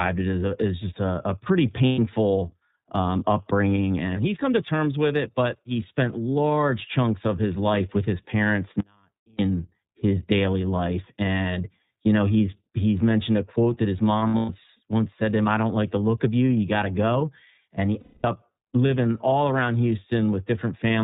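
It's a speech recording, and the whole thing has gone through the iLBC codec. Nothing above 4 kHz survives, so it sounds muffled, and the voice has a slightly rough, synthetic edge. That fits iLBC's 30 ms frame mode at around 13.33 kbps, where each frame's excitation is coded independently. There are three spots of lost iLBC frames. Right after "just a a pretty", from 1.86 to 1.99 s, about 120 ms is missing, consistent with four lost frames. From 14.18 to 14.50 s, between "a quote that his" and "once said to him", about 210 ms is lost, scattered across roughly 300 ms, with the longest run around a tenth of a second. From 18.00 to 18.25 s, just before "up living all around", about 240 ms goes missing. Each gap sounds like a held, slightly buzzy vowel, because the decoder repeats the last pitch cycle with noise mixed in. The voice comes back clean almost immediately since the frames stand alone. 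The other problem is an audio dropout to a faint residue from 8.80 to 9.39 s, about 0.59 s. The speech cuts off abruptly and only a faint sound remains, roughly 40 dB below normal. The likely cause is a signal loss upstream while the path after the break stayed live.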